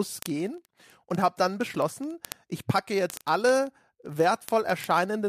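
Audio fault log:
0.12–5.27 s, word clock ticks: a steady stream of sharp single-sample ticks runs under the speech, roughly every 40 ms (about 25 per second, some 150 in all) and uneven in strength. A receiver on its own clock reading an unlocked digital link slips one sample each time the clocks pass, a rate that fits an error of around 500 ppm. Unlike buffer dropouts, there are no audible gaps, only fast, even-paced clicks.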